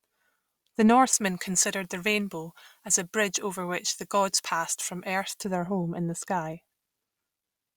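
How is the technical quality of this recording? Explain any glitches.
There's a tonal problem in the middle of this speech clip. From 1.13 to 5.45 s, ending just before "their home in the", it has pre-emphasis left on. The treble was boosted for recording or transmission and the matching de-emphasis never went in. The tilt fits a J.17 curve, leaving 10 kHz about 11 dB hotter than 1 kHz. So that stretch sounds thin, bright and sibilant, then snaps back to normal balance.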